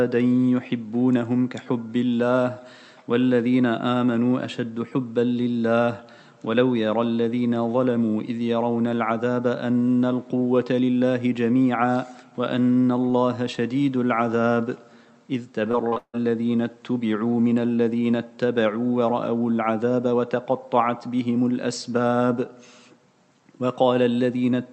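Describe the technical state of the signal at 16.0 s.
At 16.0 s the audio is inside a burst of repeated packet loss running from 15.71 to 16.15 s. Four holes fall in that stretch, the longest 157 ms. Each is patched by stretching the preceding sound, so about half the span is concealed filler. The result is choppy sound with pieces missing. Unlike a single packet dropout, which gives one brief smear, these holes follow each other closely, so the stuttering texture persists throughout, over the call path's band limit near 8 kHz.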